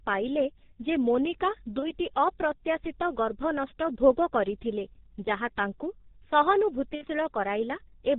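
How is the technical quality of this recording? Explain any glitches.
The technical quality is poor. The speech sounds muffled and hoarse throughout, with blurred consonants and nothing above 4 kHz. This points to the G.723.1 codec at about 6.3 kbit/s, whose 30 ms frames and slow voice model smear detail.

From 1.79 to 1.94 s, and again from 6.95 to 7.05 s, there are glitches from VoIP packet loss concealed by the speech codec. The speech stretches into a fading buzzy or noisy sound, and it stays weak for a moment after it resumes. The gaps fit about 30 ms and 60 ms of missing audio. The decoder fills each gap from its last pitch and filter, turning the gain down frame by frame.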